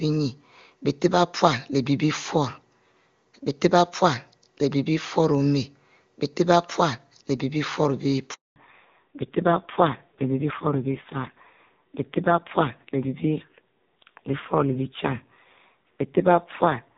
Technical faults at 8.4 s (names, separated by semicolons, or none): handover gap